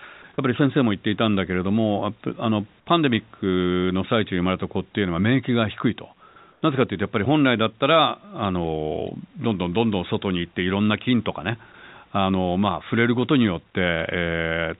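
At 0.22 to 0.24 s, a brief sound is dropped by the voice detector. About 10 ms of real sound vanishes into 20 ms of steady hiss. The likely cause is the detector mistaking quiet speech, a word ending or another sound for background and muting the sender until it retriggers.

From 6.52 to 6.62 s, comfort noise replaces the background for 100 ms. The room noise, about 40 dB below the speech, turns smooth and featureless at the same level. This is likely discontinuous transmission: the sender paused, and the receiver synthesised noise.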